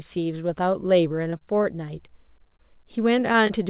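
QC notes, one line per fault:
1.30 to 3.51 s, short concealed packet loss: about 20 ms of speech went missing at 1.30, 2.39, 3.33 and 3.47 s. The decoder covered each hole by continuing the last sound, then crossfaded back. The result is a brief smear or wobble where a short consonant can vanish. At 2.39 s the patch runs about 10 ms longer than the gap, and at 3.33 s about 13 ms was cut away. On a spectrogram each shows as a thin slice of frozen, over-smooth harmonics or blurred noise. The waveform shows a few copied cycles where the speech was voiced.
1.38 to 3.23 s, short stall from a late packet: the jitter buffer ran dry, so the last sound was stretched until the packet arrived. This happened for 32 ms at 1.38 s and 20 ms at 2.57 and 3.19 s. Nothing is lost, but a sound is held too long with a faint buzz or dip. A spectrogram shows the harmonics running flat and slightly lengthened, all under the call path's 4 kHz ceiling (G.711 A-law). 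The waveform shows identical repeated periods.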